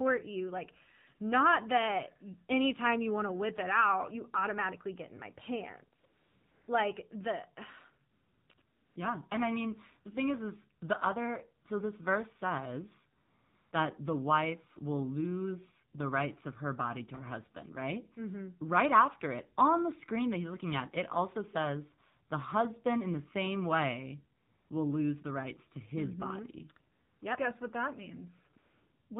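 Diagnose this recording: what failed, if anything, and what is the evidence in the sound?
The codec stage failed: the whole recording carries AMR narrowband mobile codec damage. Nothing above 4 kHz survives, and the speech sounds plainly buzzy and synthetic, with the rasp of a vocal-tract model driven by sparse pulses. That coarseness fits one of AMR-NB's low modes, around 7.4 kbps. Plain band-limiting would dull the top end without this buzz, which points to model-based coding rather than a simple low-pass filter.

The call-processing stage adds AMR comfort noise in ten pauses between 6.00 and 29.10 s, clustered near 6.0 to 6.7, 8.1 to 9.0, 13.2 to 13.7, 24.4 to 24.7, 26.9 to 27.2 and 28.5 to 29.1 s. The gaps run from 20 ms to 620 ms. Discontinuous transmission stopped sending speech frames during those pauses, and the receiver synthesised smooth, steady noise from a rough level and spectrum. 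The noise switches in and out abruptly, unlike a dropout, which would leave true silence.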